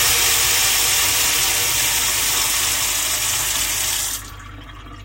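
Everyday sound with no audible technical faults.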